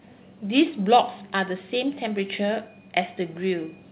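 Nothing stood out on listening to this speech; what can be heard is the narrow band of an ordinary call line, with nothing above about 4 kHz.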